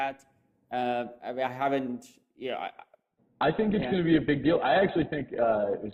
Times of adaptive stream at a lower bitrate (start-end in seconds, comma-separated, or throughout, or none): 3.03-5.93